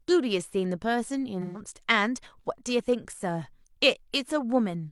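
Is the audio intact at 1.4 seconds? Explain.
No. From 1.41 to 1.59 s the speech turns into a brief smeared, noisy or phasey patch. The clear detail of the voice blurs for under a fifth of a second. This is AAC frame loss with concealment. About 128 ms of coded audio went missing, which fits three lost frames. The decoder covered the gap by reusing the last good spectrum with scrambled signs or interpolated energy, and that reused spectrum is what causes the smeared sound.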